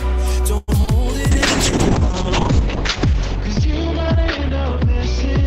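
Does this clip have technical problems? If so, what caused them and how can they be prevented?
Yes. From 0.57 to 0.70 s the sound is stretched into a fading buzz for about 100 ms, then resumes where it stopped with nothing lost. This is a call audio freeze, likely from delayed packets emptying the jitter buffer. A deeper jitter buffer or a steadier network path would prevent it.

At 0.82 to 0.85 s and 0.85 to 0.89 s come two brief smears, each about 20 ms of lost audio patched by extrapolation. This is short concealed packet loss: unlike the freeze, audio is genuinely replaced rather than delayed. Forward error correction or redundancy would prevent it.

From 1.32 s to the end, a call bitrate drop from 96 to 7 kbps makes the sound rough and muffled, with the top end cut from 20 kHz to 8 kHz. This lasts seconds rather than hundredths. Better bandwidth headroom or smoother rate control would prevent it.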